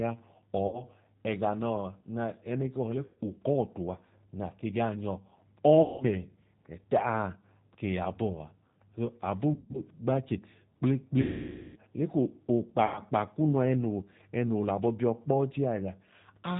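Speech throughout carries the G.729 codec's plainly audible rough, synthetic texture: energy stops at 4 kHz, so a spectrogram shows an empty band above it. VoIP packet loss concealed by the speech codec interrupts it at 0.67, 3.06 (just before "k'ukọọtu a na ke"), 5.82, 9.54, 11.22 and 12.86 s, with gaps of about 60, 120, 180, 160 (scattered), 540 and 100 ms. The decoder stretches the last sound into a fading buzzy tone or coloured noise, showing as smeared spectral content and a decaying waveform envelope. The longest gap fits roughly 27 lost 20 ms packets.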